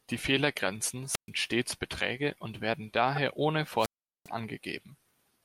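At 1.08 to 1.30 s a wireless microphone squelch dropout occurs: the fading radio link lets hiss swell before the receiver mutes for about 0.13 s. That rising static, not a clean digital gap, marks it. A single corrupt frame decoded at 3.16 to 3.18 s adds a brief burst of misplaced energy near -20 dBFS. A second squelch dropout, from 3.77 to 4.30 s, holds near-silence for about 0.40 s.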